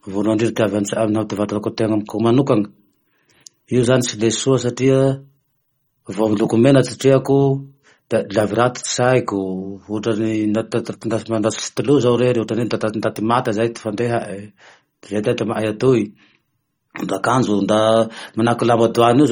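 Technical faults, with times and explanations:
Throughout: MP3 compression. The speech has a watery, swirling quality, with metallic chirps on s sounds and consonant attacks that smear, and nothing is present above 17.8 kHz. This is likely a heavily starved MP3 encode; the plainly audible damage fits a bitrate around 32 kbps. Unlike broadband noise or a simple low-pass, the texture shifts from moment to moment as weak frequency lines drop in and out between frames.
1.33 s and 11.59 s: electrical switching spike. Each is a sharp snap or tight cluster of clicks sitting on top of the speech, lasting at most about 5 milliseconds. The likely cause is a nearby switch, motor or static discharge arcing briefly and being picked up on the audio line. Unlike codec artefacts, these are isolated, instantaneous events that don't reshape the surrounding sound. Unlike dropouts or digital glitches, they add energy rather than removing or repeating any of the signal.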